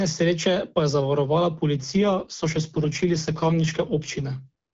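From 1.76 s to 4.24 s, just after "pa je zavarovala", the speech shows an AMR rate drop. The AMR-WB stream, whose lightly coded opening sounds consistent with 12.65 kbit/s, falls to a rate that points to 6.6 kbit/s, the lowest wideband mode. The voice turns raspy and synthetic. Unlike a fallback to narrowband, the upper band stays present, and unlike packet loss there is no gap or dropout.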